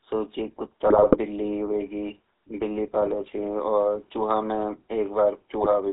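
Speech carried over a GSM full-rate codec throughout: the sound is buzzy and gravelly, and the band runs only from about 300 Hz to 3.7 kHz, which fits the 13 kbps full-rate coder. A spectrogram shows hard edges at both ends and a grainy, pulse-driven harmonic texture. GSM bit errors break up the sound from 0.87 to 1.17 s (between "सु छ" and "बिल्ली होएगी"), from 3.01 to 3.15 s, and from 5.6 to 5.67 s. Corrupted filter, pitch and gain values garble the decoded frames into squawks and gargling, visible as smeared, misplaced spectral energy and sudden level jumps in the waveform.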